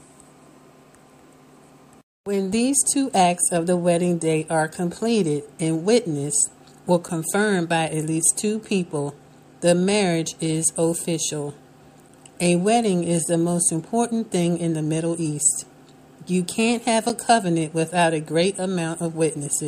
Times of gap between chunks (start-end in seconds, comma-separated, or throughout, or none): 17.09